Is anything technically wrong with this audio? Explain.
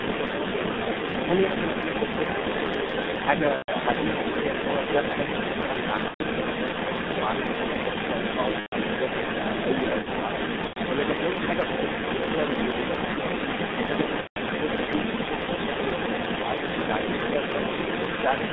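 Yes. Three faults are audible.

G.723.1 codec: throughout the clip, the speech passes only about 150 Hz to 3.7 kHz at roughly 6.3 kbit/s, heavily coded, so it sounds muffled and hoarse, with smeared consonants.

Other side's voice leaking through: for the full clip, a second voice sits at roughly the same level as the main speech. This is likely residual echo that the far end's canceller failed to remove.

VoIP packet loss concealed by the speech codec: at 3.56–3.72 s, 6.08–6.22 s, 8.60–8.74 s, 10.67–10.80 s and 14.21–14.38 s, the decoder extrapolates over missing data, stretching the sound into a fading tone or noise that is muted from the third lost frame. The gaps are consistent with three to five lost 30 ms frames.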